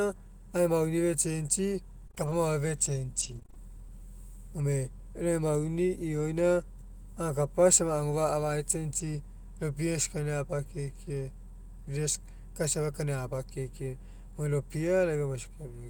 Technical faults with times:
2.07-3.57 repeated packet loss (robotic sound)

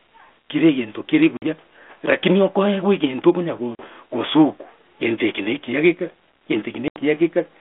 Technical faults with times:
1.37-1.43 packet loss on an ADPCM call
3.75-3.82 packet loss on an ADPCM call
6.88-6.98 packet loss on an ADPCM call

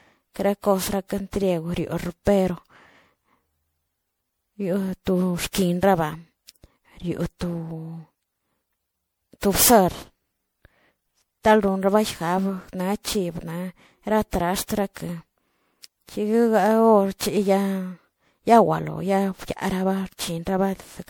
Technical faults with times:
0.00-21.09 generation loss

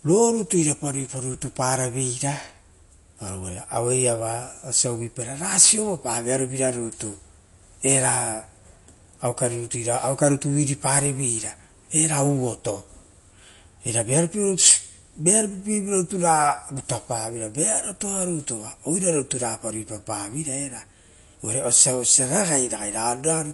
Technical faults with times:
0.00-23.53 MP3 compression

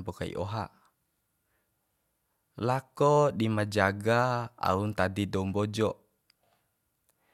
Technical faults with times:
none

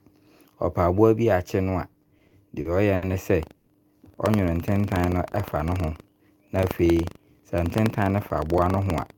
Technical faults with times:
1.93-3.04 repeated stalls (stutter)
3.39-9.18 buffer tearing
3.56-3.69 call audio freeze
6.57-6.98 jitter buffer speed-up

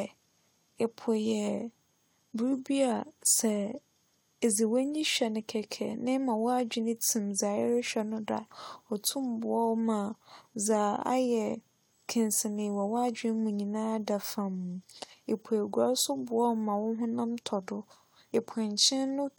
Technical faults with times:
none

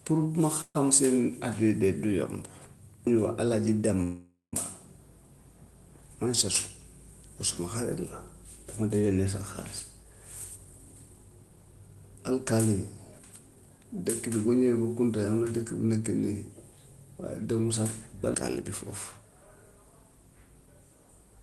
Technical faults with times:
0.61-0.77 call audio freeze
4.03-4.55 call audio freeze
9.80-15.52 jitter buffer speed-up

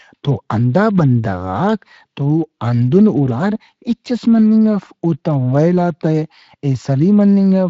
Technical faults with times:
none

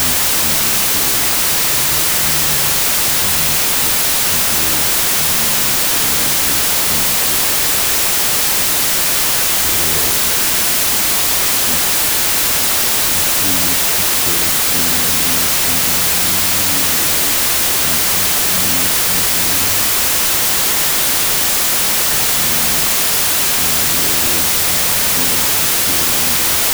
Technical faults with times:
0.00-26.73 wrong sample width

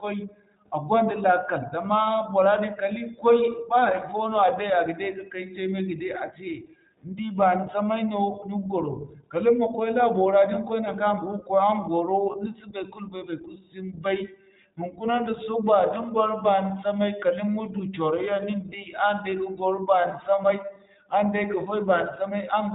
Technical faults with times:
0.00-22.75 iLBC codec
12.32-12.36 lost iLBC frames

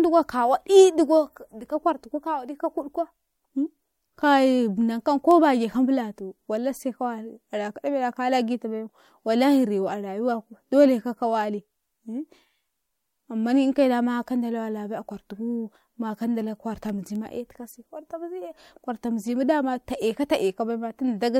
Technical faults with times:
16.89 electrical switching spike

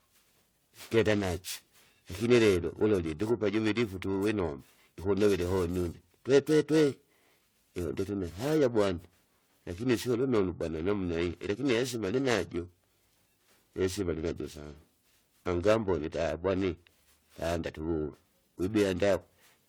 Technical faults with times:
0.00-19.69 generation loss
0.00-19.69 periodic clock jitter

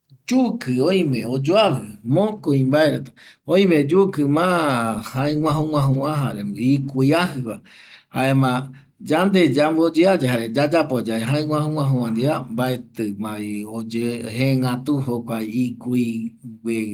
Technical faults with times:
none

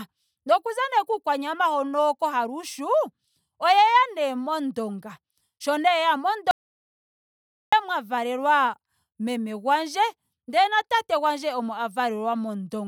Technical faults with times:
6.51-7.72 audio dropout to silence

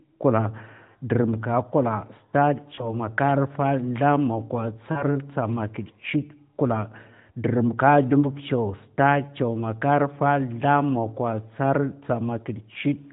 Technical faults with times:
2.76-2.90 lost AMR speech frames
4.92-5.03 lost AMR speech frames

